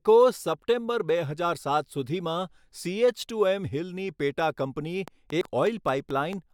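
From 5.08 s to 6.34 s a train of clicks ticks over the speech, about seven evenly spaced pulses at 4.5 per second, peaking about 5 dB above the signal. The matching shape and steady pace point to a likely source in interference or a struggling interface, not the recording itself. At 5.41 s, within that run, damaged data in a compressed stream gives a single blip. The decoder misreads a corrupted frame and hunts for the next header, so this event is one-off and irregular, unlike the repeated clicks.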